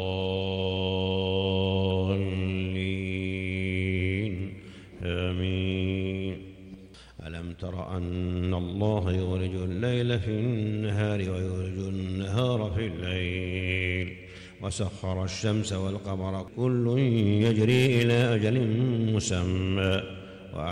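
No technical faults can be heard anywhere in this recording.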